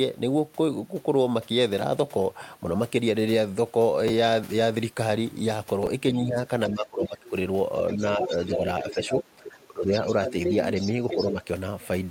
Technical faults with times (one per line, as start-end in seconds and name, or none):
4.08 chunks out of order
5.83-5.87 chunks out of order
6.12-7.33 speech suppressed in double talk
7.89-8.48 other side's voice leaking through
7.95-10.35 speech suppressed in double talk
8.81-9.49 other side's voice leaking through
10.06-11.33 other side's voice leaking through
11.15-11.43 speech suppressed in double talk